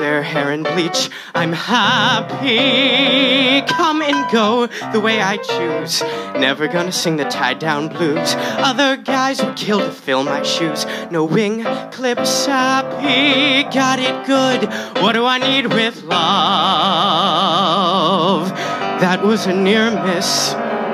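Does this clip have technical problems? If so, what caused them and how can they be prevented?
No, the signal shows no technical faults anywhere in the clip.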